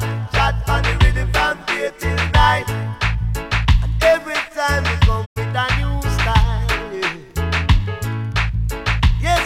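At 5.24 s the sound fades out over about 20 ms and drops into silence, coming back at 5.38 s with the material that should have filled the gap simply missing. This is a digital broadcast dropout. The receiver stopped getting usable frames, either because the signal was lost or because frames failed their checksum, and it muted its output until valid data returned. The length of the hole fits about three lost frames.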